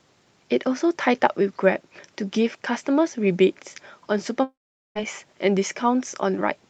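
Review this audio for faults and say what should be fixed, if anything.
From 4.43 to 4.98 s the speech trails into a fading buzz, then sits near-silent for about 0.42 s before resuming with about half a second lost, likely a long network dropout. A spectrogram shows a smeared, decaying band and then an empty gap; the waveform goes flat. Prevent it by stabilising the network link and using redundancy or forward error correction on the call stream.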